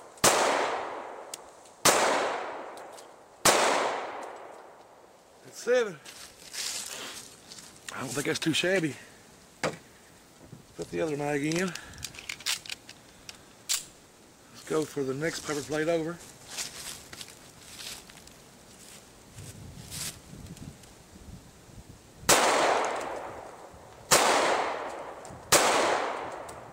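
No technical faults can be heard anywhere in this audio. There is nothing to place on a timeline or trace to a cause.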